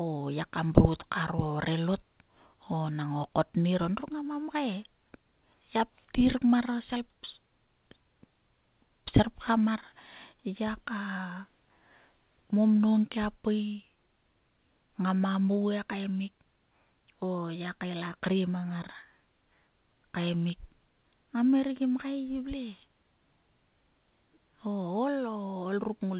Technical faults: none

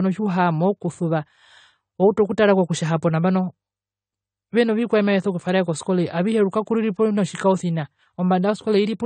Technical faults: AAC compression

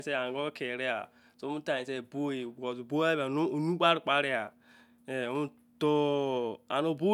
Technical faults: none

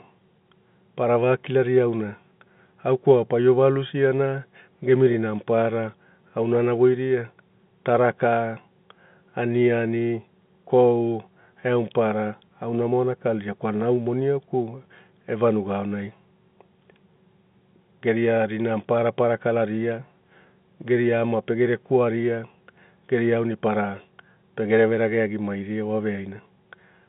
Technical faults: none

